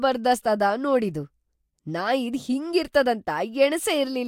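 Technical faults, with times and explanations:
No technical faults are present.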